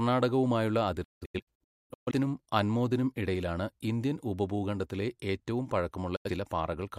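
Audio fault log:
1.04–2.11 s, digital broadcast dropout: the receiver repeatedly lost the signal or rejected corrupt frames and muted each time. About 0.73 s of audio is missing, scattered across roughly a second in several holes, the longest 256 ms, before the sound returns at "അൻമോദിനും ഇടയിലാണ് ഇന്ത്യൻ ഉപഭൂഖണ്ഡത്തിലെ". Each mute ramps down over 8 ms. The waveform shows a comb of flat-line gaps, and the spectrogram shows blank vertical bands with clean edges.
6.16–6.30 s, digital broadcast dropout: a single short mute of about 85 ms right after "ഇടയിലാണ് ഇന്ത്യൻ ഉപഭൂഖണ്ഡത്തിലെ ഏറ്റവും". The receiver discarded a brief stretch of bad data, and whatever was sent during it is gone. The 8 ms fade makes the cut sound like a sudden hole rather than a click. On the waveform it is one flat gap, and on the spectrogram it is one narrow empty column.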